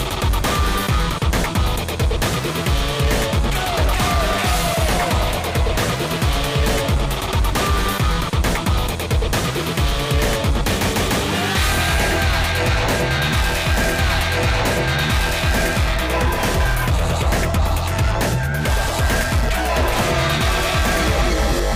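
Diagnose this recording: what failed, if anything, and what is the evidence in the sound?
Nothing failed: the sound gives no evidence of a fault at any stage.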